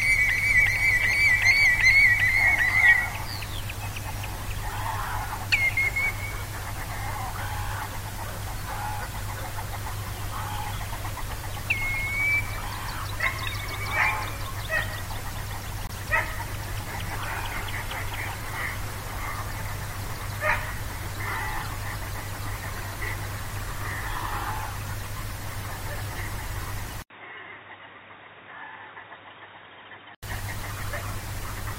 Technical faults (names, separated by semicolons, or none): corrupt frame muted; input switched to a poorer device